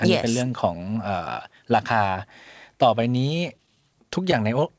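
From 3.02 to 4.34 s, packets arrived late, draining the jitter buffer; these repeated stalls (stutter) fill tiny gaps, making the sound drag and stutter.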